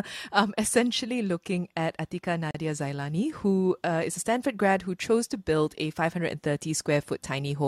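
At 2.51 s the speech stops dead for about 35 ms, resuming at 2.55 s. This is a gap between stream segments. The audio arrives in 2.0 s segments, and here the timing of one segment ends short of where the next begins. The player covers the mismatch with silence. Both edges of the hole are abrupt, so it sounds like a brief hard dropout. Nothing is missing from the speech. The extra silence just pushes everything after it slightly later.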